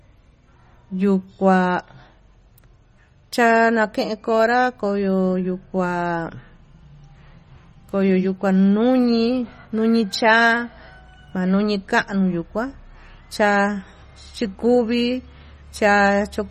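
A speech recording carries plainly audible MP3 compression from start to finish, most likely from a low-bitrate encode, consistent with roughly 32 kbps. The sound has a watery, swirling texture as weak spectral lines drop in and out between frames. Consonant onsets lose their crispness, smeared by the coarse frame-based coding.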